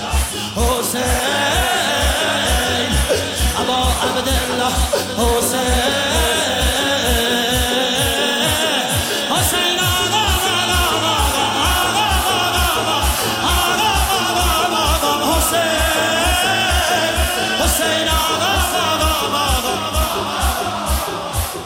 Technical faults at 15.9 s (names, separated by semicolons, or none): clock slip clicks